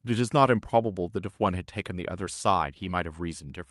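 Nothing goes wrong anywhere in this bit of speech; it just carries the ordinary character of a call path, with the top end rolling off at around 12 kHz as you'd expect from an Opus link at a fairly generous rate.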